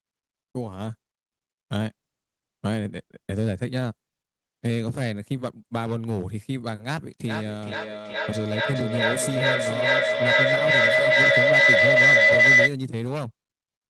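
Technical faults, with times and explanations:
7.26–12.79 s, feedback howl: a shrill tone around 2 kHz swells out of the speech, pulsing roughly every 400 ms and peaking at about 10 dB above the talker before cutting off. Two devices in the same room are joined on the call, so the sound leaving one loudspeaker re-enters the other microphone and returns louder each trip. The loop's delay sets the pulse rate, and its strongest frequency sets the pitch of the howl.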